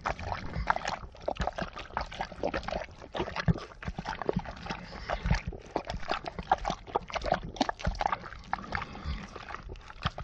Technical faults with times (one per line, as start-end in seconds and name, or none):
0.45-0.56 phantom power thump